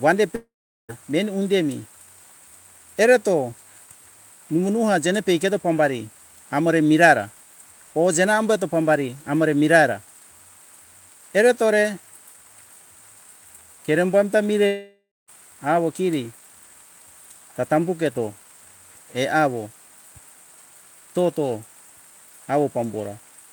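At 0.35 s the speech breaks off and a buzzy continuation of the last sound fades out, leaving about 0.4 s of silence before the audio resumes at 0.91 s with "meni undemi". This is likely a long network dropout: roughly half a second of audio never arrived and is simply skipped. After "kerembo amta" the same thing happens from 14.67 to 15.30 s, with a shorter silence of about 0.23 s. On a spectrogram, smeared harmonics thin into a blank band. The waveform shows a decaying envelope falling flat.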